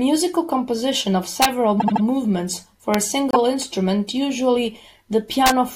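First crack comes at 1.42 to 1.45 s. That's integer overflow: the speech peaks push about 1 dB past the largest value the integer format can hold, and instead of being limited they wrap around to the opposite sign. The result is a harsh snap, much nastier than ordinary clipping.

Then from 1.79 to 2.03 s there's repeated frames. A 78.4 ms chunk plays three extra times, giving a stuttery, looped feel. That adds about 235 ms, which fits three compressed frames being sent again.

At 2.94 s there's another overflow crack. This one is right at the limit, but it still wraps and snaps.

At 3.31 to 3.36 s a single 26.1 ms piece repeats once. That's a quick hiccup, adding 26 ms, and it points to one duplicated frame.

Finally, 5.46 to 5.50 s brings one more overflow, about 1 dB over, with the same violent crack.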